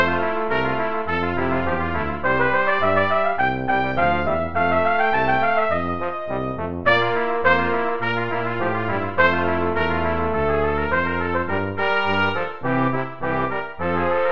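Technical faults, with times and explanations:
No technical faults can be heard anywhere in the audio. There is nothing that needs a time or an explanation.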